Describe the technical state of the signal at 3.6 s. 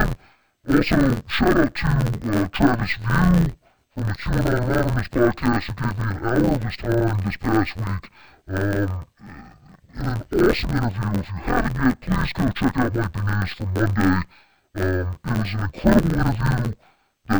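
At 3.6 s, as throughout the clip, interleaved audio is being read as planar: each block of roughly 11.61 ms, which fits a 512-sample buffer, is split into halves rather than alternating samples, so the speech sounds dull and robotic, buzzing at 86.1 Hz, without a clear octave drop.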